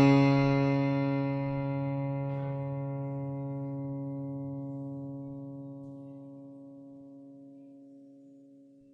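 From start to finish the music is dull and smeared, with a fizzy warble on sustained tones, likely from AAC compression at a low bitrate, around 32 kbps. A spectrogram shows nothing above 15.7 kHz.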